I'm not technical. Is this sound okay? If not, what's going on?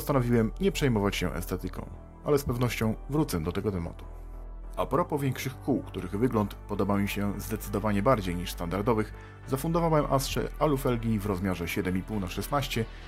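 No. From start to finish there's a low, steady buzz under the sound, pulsing about 43 times a second, while the pace and pitch stay normal. This is a block size mismatch (truncated). Audio is passed between stages in small chunks, and here one stage hands over chunks bigger than the next one takes in, so a sliver at the end of each chunk is cut off. Those regular cuts are the buzz, and the rate fits chunks of 1024 samples.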